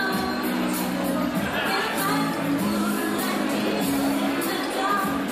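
Nothing here trips any alarms: the audio runs its course without a single glitch worth pointing to.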